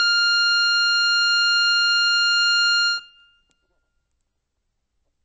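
Music runs through MP3 compression for its whole length, likely from a very low bitrate near 32 kbps: treble stops dead above 8.3 kHz, and starved spectral lines flicker between frames into a watery swirl, which separates it from a clean low-pass filter's steady dullness.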